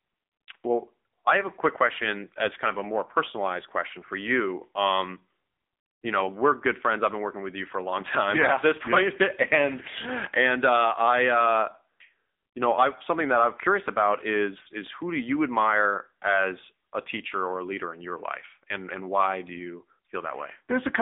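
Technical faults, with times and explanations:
Throughout, AMR narrowband mobile codec: buzzy, synthetic speech, fitting a low mode near 8 kbps; the spectrogram shows a 200 Hz to 3.6 kHz band, empty above 3.7 kHz.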